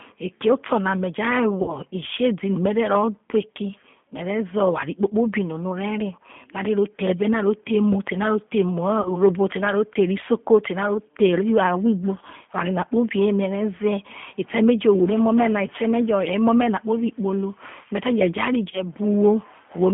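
It's a speech recording that's gone through a G.729 codec at 8 kbit/s the whole way: the line is squeezed to roughly 150 Hz to 3.5 kHz, and the voice has that plainly audible rough, slightly synthetic edge from being rebuilt out of a filter, a pitch predictor and a handful of pulses per frame. There are also three spots of VoIP packet loss concealed by the speech codec, at 1.62 to 1.77 s, 9.01 to 9.21 s and 18.71 to 18.81 s. About 60, 40 and 20 ms of audio went missing, which fits three, two and one lost 20 ms packets. At each one the decoder stretches out the last bit of voice into a fading buzzy or noisy smear, and the sound stays a bit weak or off for a moment after the audio resumes.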